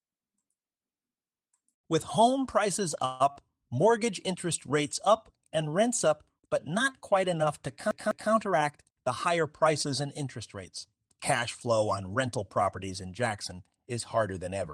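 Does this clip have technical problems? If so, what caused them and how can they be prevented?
Yes, there are four. From 3.05 to 3.22 s the sound stalls: the last moment is stretched into a buzzy tone that fades over about 147 ms, then the audio resumes where it left off, now running 147 ms later. This is most likely a call audio freeze, where delayed packets emptied the jitter buffer and the receiver extended the last sound. On a spectrogram the final harmonics continue as flat, fading horizontal bands with no new articulation; the waveform shows a smooth, decaying repeated cycle. A larger adaptive jitter buffer or a network path with less queuing delay prevents this.

Shortly after, from 3.32 to 3.38 s, there is short concealed packet loss: about 40 ms of audio never reached the decoder, and the receiver filled the hole by extrapolating the preceding sound before crossfading back. It comes across as a brief smear or wobble. 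A spectrogram shows a short patch where the harmonic detail blurs or freezes, and the waveform has a slightly too-regular stretch with a soft join at each end. Forward error correction or redundant packet transmission prevents this.

From 7.91 to 8.31 s the audio behaves like a CD stuck on one turn: the same 0.2 s segment plays twice in a row, with a small mute at each jump, giving the quick, even stutter of a skipping disc. The laser is being thrown back to the same spot on each revolution. The waveform shows identical blocks repeated at exact 0.2 s spacing, and the spectrogram shows the same pattern copied side by side, separated by thin vertical gaps. Cleaning or replacing the disc, or ripping it with error-correcting software, prevents this.

From 8.52 to 10.70 s a jitter buffer speed-up makes the audio run about 7% fast while keeping its pitch, so it sounds slightly hurried. The buffer had built up more delay than its target, and the receiver trimmed it by cutting out pitch-period-sized slices many times over, roughly 150 ms in total. 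The spectrogram keeps the harmonic spacing unchanged but compresses the events along the time axis, and the waveform shows small splices where cycles were removed. Steadier packet delivery, so that delay doesn't build up and then have to be shed, prevents this.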